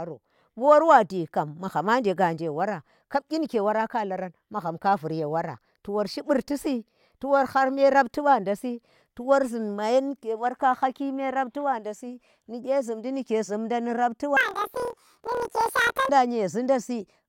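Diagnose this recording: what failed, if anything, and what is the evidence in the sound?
Sample-format conversion broke from 14.37 to 16.12 s: planar audio read as interleaved. The speech jumps an octave and flutters at about 38.3 Hz, since each 26.12 ms block plays its left half then right half at double speed.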